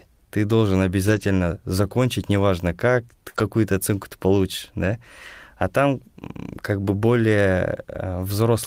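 Speech with lost packets rebuilt from error correction at 1.07–1.25, 3.34–3.40, 4.92–4.94 and 6.84–6.94 s. The decoder played low-bitrate copies, so nothing drops out, but these stretches sound rougher and noisier and show as smeared, grainier patches on a spectrogram. A burst of packet loss at 3.29–3.36 s is filled with about 47 ms of the last sound extended and fading, a decaying tail on the waveform, before the audio resumes with about 40 ms skipped.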